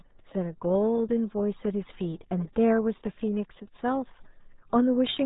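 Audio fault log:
throughout RealAudio 14.4 codec: nothing above 3.8 kHz survives, so the speech comes across muffled, with a gargly texture. That heavy damage fits audio squeezed down to around 8 kbit/s for a dial-up modem line.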